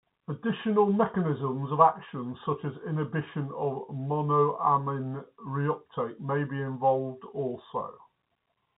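No technical faults can be heard in this speech. It carries the narrow band of G.711 telephone coding, with nothing reaching above about 3.9 kHz.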